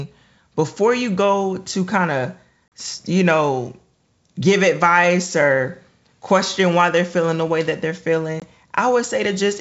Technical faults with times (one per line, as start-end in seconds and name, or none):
2.68-2.72 packet loss on an ADPCM call
8.40-8.44 packet loss on an ADPCM call